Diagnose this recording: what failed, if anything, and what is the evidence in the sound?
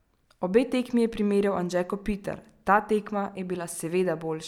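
Nothing in the chain from capture to playback has failed: the speech signal arrives intact at every stage, with no audible damage introduced along the way.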